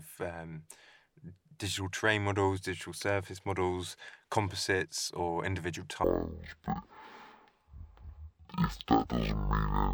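From 6.04 s to the end at 9.94 s, just after "models composites or individual", the speech falls into a stereo read as mono fault. Left and right samples are taken in turn as one channel, so the speech runs at half speed and a full octave low until "to you don't worry". On a spectrogram, harmonics compress toward the bottom, with a fainter mirrored copy in the upper half. The waveform looks stretched to twice its length.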